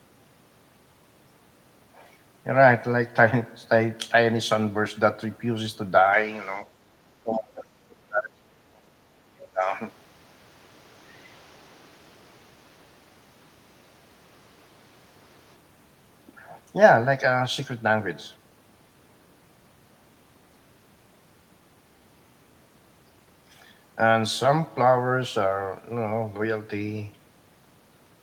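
The speech abruptly turns duller at 6.13 s and stays that way until 15.56 s, with its upper frequencies narrowed, a faint new noise sitting well below the voice, and no gap or jump in level at either switch point. The likely cause is the input switched to a poorer device partway through the recording, such as another microphone or a headset's call profile, whose narrower band and own noise floor replace the original pickup for those nine seconds. Within that stretch, from 6.67 to 6.94 s, the room background dips by about 13 dB for roughly 300 ms and then recovers. That is the background gated by the echo canceller: while the loudspeaker was playing, the canceller clamped the microphone down hard and then let go. Right after, from 7.23 to 9.61 s, the talker's own speech is pushed down deeply, nearly out of hearing at its worst, over about two seconds in total. This is likely speech suppressed in double talk. 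With both sides talking at once, the echo canceller could not tell the talker's voice from the loudspeaker echo and turned both down together. At 9.63 to 9.71 s a brief, very faint scrap of a second voice slips through, far below the talker's level. That is likely the other side's voice leaking through, a remnant of the far end's loudspeaker playback that the echo canceller failed to remove from the microphone signal.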